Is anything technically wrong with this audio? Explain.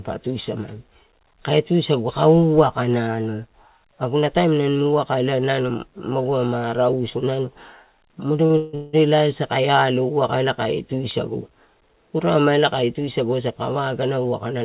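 Yes, two things. Between 8.46 and 8.95 s there are repeated stalls (stutter): packets arrived late, the jitter buffer kept running dry, and the receiver stretched the last sound across four gaps, the longest 179 ms. About 80 percent of that half-second is filler, so the speech drags and stutters, though nothing is actually lost.

From 12.83 s to 14.61 s there's a jitter buffer speed-up. The buffer had built up extra delay, so the receiver kept snipping out tiny pitch-period chunks, around 0.15 s in all. The speech runs about 8 percent fast at unchanged pitch and comes across hurried.

Throughout, nothing sits above 4 kHz, which fits a narrowband call codec like G.711 A-law.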